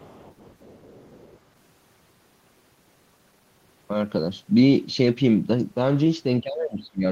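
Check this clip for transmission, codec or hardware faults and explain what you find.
Two echo-canceller faults are audible in this speech clip.

From the start to 1.39 s, the other side's voice leaking through appears as a faint second voice well below the talker. The likely cause is loudspeaker sound reaching the microphone and escaping cancellation. A separate, independent voice distinguishes it from reverb or a pre-echo artefact.

From 6.41 s to the end, speech is suppressed in double talk. The talker's level falls steeply while both sides are talking, likely because the canceller could not separate the talker from the echo and turned everything down. It differs from a dropout in following the overlap rather than cutting out abruptly.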